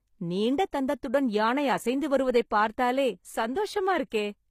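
From start to end the speech carries plainly audible HE-AAC compression damage. The treble is likely being resynthesised by spectral band replication rather than coded: upper bands are copied up from lower ones and shaped only roughly, consistent with a stream around 24 kbps. Unlike a plain low-bitrate codec, which simply dulls the top end, the treble here stays bright while its harmonics fail to line up, so s sounds come out gritty, metallic or lispy.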